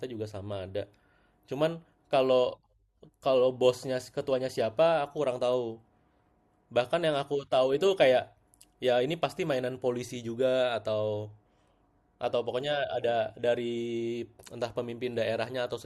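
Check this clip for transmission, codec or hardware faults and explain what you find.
Listening to the speech, I hear nothing that points to a transmission, codec or hardware fault. There is no event in the clip that needs a time or a mechanism to explain it.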